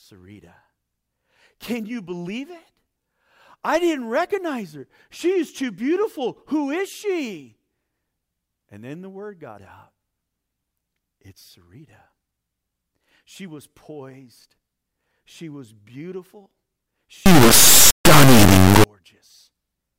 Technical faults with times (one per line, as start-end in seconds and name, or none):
17.26-18.84 integer read as float